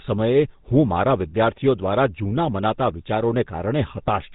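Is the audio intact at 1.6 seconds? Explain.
No. At 1.6 seconds, as across the whole clip, the speech carries GSM full-rate codec damage, and it is plainly audible. The codec models the vocal tract as a filter and drives it with a sparse train of regularly spaced excitation pulses, so fine detail in the source is lost and the voice takes on a buzzy, gravelly roughness. The band also stops at about 3.8 kHz, which fits the 13 kbps full-rate coder.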